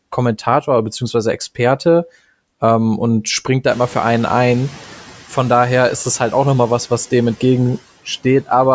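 Right after "ähm und springt da", at 3.70 s, the room noise that jumped about 18 dB comes through with little reduction, then sinks by about 5 dB until 4.86 s. This is the noise suppressor catching up: its noise estimate needed 1.16 s to adapt.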